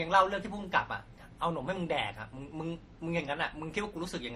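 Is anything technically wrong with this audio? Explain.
Yes. Throughout the speech, the sound carries stacked compression damage. There is nothing above 16.1 kHz. Several kinds of artefact are heard at once, each codec's mixed with the others. The likely cause is transcoding between lossy codecs. The pattern fits a chain of Vorbis, MP3 and finally Opus, each near 48 to 61 kbit/s. Every later encoder spent bits redrawing the earlier codec's artefacts and added its own. The lowest cut-off stayed.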